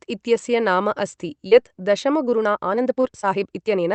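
From 1.47 to 1.53 s there is a short concealed packet loss: about 40 ms of audio arrived too late, and the decoder filled it by extending the preceding sound before blending back. It is heard as a brief smear. On a spectrogram the harmonics run flat and blurred across the gap.

From 2.25 s to the end, the pace jumps to about 1.5 times normal while pitch holds steady, giving a choppy, rushed delivery. This is likely a time-stretched section, squeezed by dropping short pieces. The spectrogram shows compressed syllables with unchanged harmonic spacing, plus seams.

Within that stretch, from 3.01 to 3.05 s, a second concealed packet loss replaces about 20 ms with synthesised continuation, heard as a small wobble. On the waveform it shows as a smoothed, slightly repetitive patch. Content stops near 8 kHz through the Opus call path.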